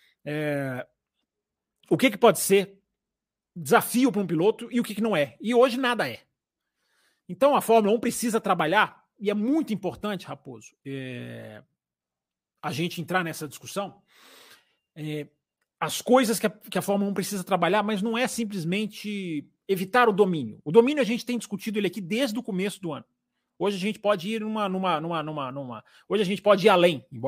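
No technical faults can be heard anywhere in this speech recording. Nothing in the signal chain breaks, drops out or distorts at any point.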